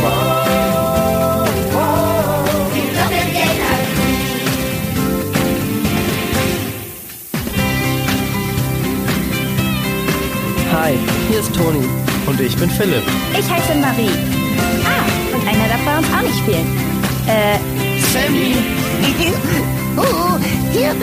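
From start to finish the audio carries low bit depth with noise shaping. Only 6 bits represent the signal, and the rounding error is fed back so it piles up high in the band, leaving a thin, steady hiss only about 10 dB below the sound that climbs sharply toward the top. Plain truncation without shaping would sound gritty and grainy across all frequencies. A noisy analogue stage would give a flatter, fuller hiss rather than this bright, top-heavy one.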